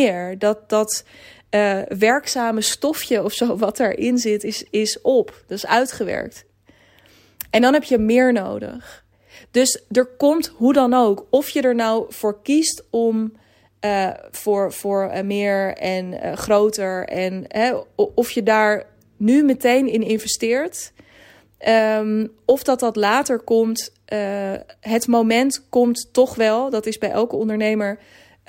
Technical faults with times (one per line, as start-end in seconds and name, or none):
none